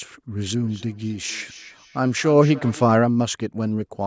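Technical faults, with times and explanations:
0.54 to 3.02 s, feedback echo between two devices: the speech returns at a fixed interval of roughly 300 ms, each repeat thinner and more ringing, peaking about 21 dB below the direct sound. Two devices on the same call sit in one room, so one device's loudspeaker replays what the other's microphone sent, and that microphone picks it up again. Each echo canceller removes only its own device's playback, so the loop survives.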